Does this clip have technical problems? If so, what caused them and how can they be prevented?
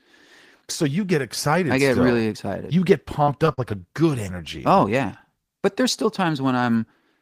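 Yes. Three bursts of short concealed packet loss hit the speech just past the three-second mark: at 3.23 to 3.30 s, 3.46 to 3.49 s and 3.53 to 3.59 s. Packets arrived too late for the decoder, so the receiver invented roughly 40 ms, 20 ms and 40 ms of audio by extending the preceding sound and crossfading back, leaving brief smeared, wobbly patches where a consonant can drop out. A larger adaptive jitter buffer, or a more stable network path, would prevent it.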